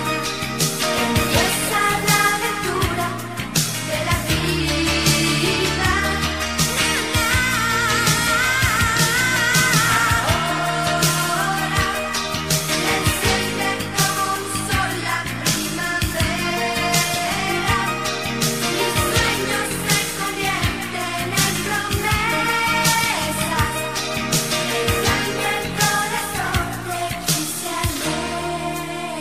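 From 4.60 s to 5.93 s the sound suddenly slows by about 5.6% and drops a full semitone (100 cents), then snaps back to normal speed and pitch. This is most likely a drift correction step, where clock-matching software changed the playback rate in one jump to manage its buffer. On a spectrogram, every harmonic band steps down by the same ratio at 4.60 s and returns abruptly at 5.93 s. The waveform shows slightly stretched cycles throughout that stretch.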